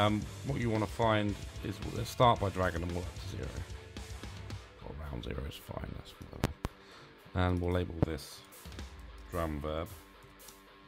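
A sudden voltage spike, likely from a plug, switch or static discharge, causes loud pops: two between 6.44 and 6.68 s and one at 8.03 to 8.06 s, each well above the sound.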